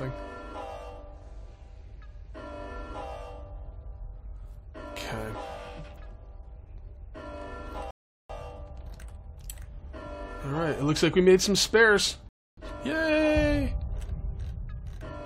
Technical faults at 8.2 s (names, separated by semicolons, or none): rebuffering stall